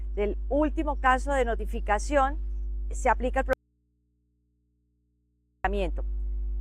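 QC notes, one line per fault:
throughout, mains hum: there's a steady 50 Hz drone sitting just under the sound, only about 5 dB below it, so it's hard to ignore. That's the power line leaking into the signal, most often through a ground loop or a transformer nearby.
3.53 to 5.64 s, audio dropout to a faint residue: the sound cuts out abruptly for about 2.1 s, with no fade, and comes back just as suddenly. The gap holds only a faint hum, roughly 45 dB down. The likely cause is the source dropping while the chain after it stayed live.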